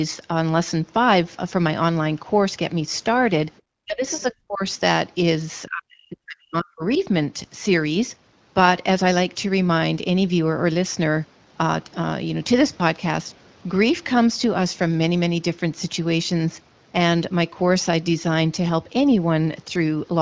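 Speech suppressed in double talk, 3.85 to 4.63 s: the talker's speech sinks in pieces for roughly half a second in total, dipping by about 30 dB at its deepest. The likely cause is that the far end was talking at the same moment, and the echo canceller, unable to tell the local talker from the loudspeaker echo, turned the microphone signal down along with the echo it was trying to remove.

Other side's voice leaking through, 4.16 to 4.22 s: a brief scrap of a second voice slips in, about 30 dB below the talker's speech, short. It is likely far-end audio from the talker's loudspeaker that the echo canceller failed to subtract from the microphone pickup.

Speech suppressed in double talk, 5.66 to 6.89 s: a longer, deeper suppression follows. The talker's speech is cut back by about 40 dB at worst, with roughly a second affected in broken stretches.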